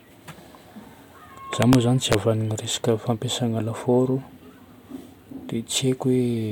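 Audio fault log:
1.62–1.75 s and 2.12–2.14 s, integer overflow: harsh, violent cracks on loud speech peaks, as samples pushed about 1 dB past the integer limit wrap to the opposite sign instead of being clamped.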